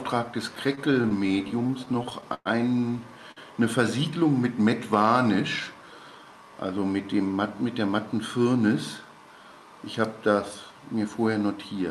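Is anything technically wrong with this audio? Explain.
Yes. Three timing faults are audible in this call audio, all from the receiver's jitter buffer rather than the Opus codec, whose band limit near 12 kHz is simply part of the call path.

From 0.55 to 2.47 s there are repeated stalls (stutter): sixteen brief holds where packets arrived late, so the buffer ran dry and the receiver extended the last sound each time. About 280 ms was filled in, the longest hold 113 ms, roughly 15% of that span. Nothing drops out, but the audio drags and judders. A spectrogram shows short smeared, frozen-looking patches with stretched harmonics, and the waveform shows repeated, slightly decaying copies of a cycle.

At 3.31 to 3.39 s a short stall from a late packet holds the sound for about 50 ms while the packet catches up, after which playback resumes where it left off. It is heard as a brief sustained moment with a slight buzz or dip. 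On a spectrogram it appears as a narrow band of flat, unchanging spectral lines, and in the waveform as a short run of near-identical periods.

Between 5.60 and 6.32 s a jitter buffer speed-up plays the audio at about 111% speed while keeping the pitch. The buffer had built up more delay than it wants, so the receiver trimmed roughly a tenth of a second in tiny pitch-period slices to catch up, which makes this stretch sound hurried. A spectrogram shows events compressed closer together with unchanged harmonic spacing, and the waveform looks slightly shortened with small splice points.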